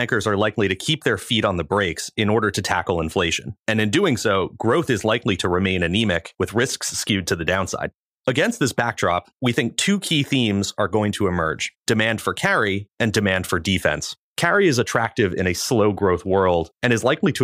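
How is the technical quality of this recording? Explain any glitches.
The technical quality of the recording is good, and there are no glitches to explain.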